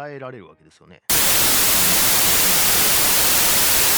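At 1.10 s the speech collapses into loud noise, with a wrong sample width lasting to the end. The sound fits 32-bit samples read as 16-bit ones. Mismatched bytes form many values. The speech stays buried underneath, at half speed and lowered pitch.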